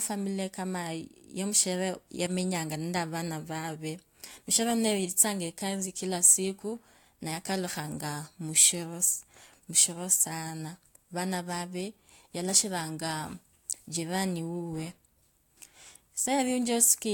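No technical faults can be heard in the signal at any point.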